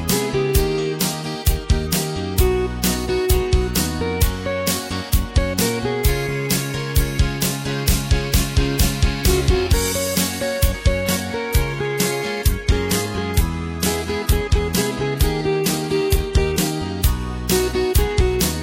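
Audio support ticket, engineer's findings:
Adaptive stream at a lower bitrate, 10.98–16.98 s (6 s): sudden, gapless drop in quality. Top end gone above 14.9 kHz, more codec smear. Probable component: player's adaptive bitrate logic stepping down on a slow connection. Sounds like a jump from a decent AAC rendition to a low-rate HE-AAC one, roughly 96 down to 20 kbit/s, then back up at 16.98 s.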